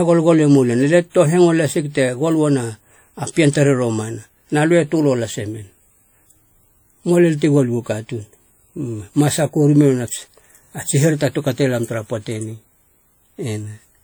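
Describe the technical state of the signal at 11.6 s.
At 11.6 s the speech carries the washy, ringing smear heard across the whole clip, likely WMA compression at a rate fitting around 48 kbps; a spectrogram shows blurred, holed upper bands.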